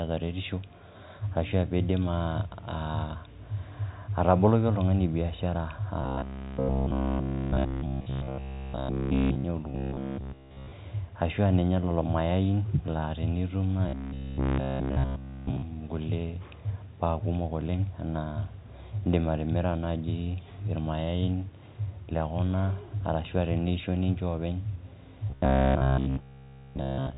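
Speech, carried over G.711 telephone coding with nothing above 3.8 kHz, turns into a rigid metallic buzz at about 66.7 Hz. This is robotic sound from repeated short buffers. It occurs from 6.01 to 9.44 s (after "ataboloki oltungani biashara"), from 9.70 to 10.72 s (before "ashuaa ninye lelo mayai"), from 13.89 to 15.62 s (after "lelo mayai laa tenitum"), and from 25.30 s to the end. All the audio in these stretches is a repeat, which points to a likely 15 ms buffer being looped in place of fresh audio. On a spectrogram, these stretches show evenly spaced harmonic lines stacked on a 66.7 Hz fundamental. The waveform shows the same short cycle copied again and again.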